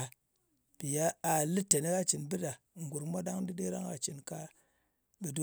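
No technical faults can be heard anywhere in the speech recording. Nothing in the signal chain draws attention to itself at any point.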